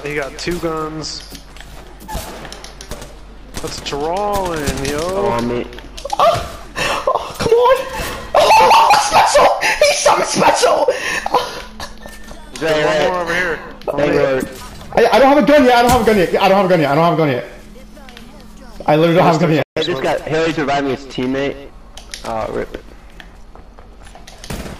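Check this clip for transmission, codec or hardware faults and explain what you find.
Two playback faults occur back to back near the end. At 19.62 s a playback stall sets in, most likely because the player ran short of buffered data or its output thread was held up. The sound simply stops mid-flow for about 140 ms, then resumes at 19.77 s.

From 19.77 s to 20.69 s comes a time-compressed catch-up: the player trims its accumulated backlog by dropping small slices and cross-fading the joins. The audio runs about 1.15 times fast at unchanged pitch, sounding rushed.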